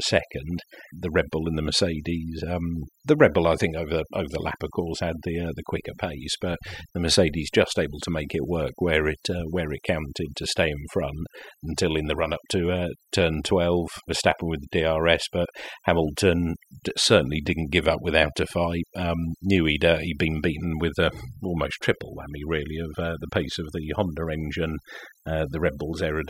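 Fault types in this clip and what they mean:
overdone noise removal: Across the whole of this speech, the gaps between phrases sink to an unnatural near-silence dotted with small twinkling, chirping specks, and the voice itself has its softer detail hollowed out. A noise reduction process has been pushed too hard, switching off individual frequency bands whenever their level sits close to its noise estimate, so the quieter parts of the voice are cut away along with the background.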